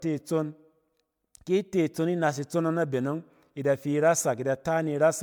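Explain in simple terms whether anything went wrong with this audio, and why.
Something did go wrong, across the whole clip. The speech has generation loss. It sounds swirly, smeared and hollow, and the starts of sounds are blurred. The likely cause is saving it as MP3 over and over, about seven times. Each save adds fresh damage.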